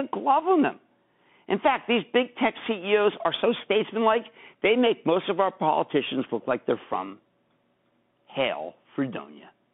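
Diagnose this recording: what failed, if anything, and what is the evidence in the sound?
Bluetooth CVSD headset codec, throughout: speech band-limited to about 150 Hz–3.5 kHz, with plainly audible scratchy s sounds and granular hiss, as the one-bit adaptive step lags fast changes.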